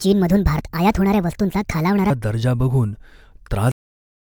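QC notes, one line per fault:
0.00–2.10 s, section at the wrong speed: The opening speech sounds hurried and chipmunk-like, raised by roughly seven semitones, then drops back to natural pitch and pace at 2.10 s. Speed and pitch move together, which points to playback running about 1.49 times too fast rather than a pitch-shift effect. The likely cause is this stretch being clocked at the wrong rate, as when an editor or player assumes a different sample rate than the one recorded.
0.59 s, damaged data in a compressed stream: A brief chirp or blip lands inside the sped-up section. Corrupted bytes in the encoded stream would leave the decoder unable to read that frame. It loses sync and emits a garbled fragment while it searches for the next valid frame header, which accounts for the glitch.
3.72 s, cut-off end: The speech stops abruptly in the middle of a sound and falls straight to digital silence, with no natural decay or room tail, and stays silent to the end. 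That hard drop means the final buffers of audio were never written or played out, so the recording was truncated at that point rather than allowed to finish.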